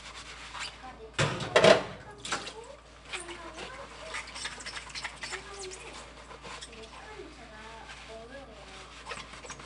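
Throughout, 4-bit ADPCM compression adds gritty hiss that rises and falls with loudness, unlike steady noise. Nothing sounds above 10.7 kHz, which fits about 89 kbps.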